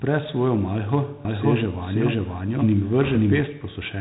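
From the start, the speech carries Dialogic VOX ADPCM damage: 4-bit adaptive coding at about 32 kbps, which fits 8,000 samples a second, leaves a gritty hiss riding on every syllable. A spectrogram shows energy cut sharply at 3.9 kHz, with grainy noise filling the band below.

At 1.25 s, just after "svojo malho", a doubled audio track begins: a second full-band copy, about as loud as the first, trails roughly half a second behind, likely from an edit or second capture path leaving two copies misaligned. It stops abruptly at 3.41 s. The waveform shows overlapping, offset envelopes, and the spectrogram shows syllable patterns repeated side by side with no decaying tail.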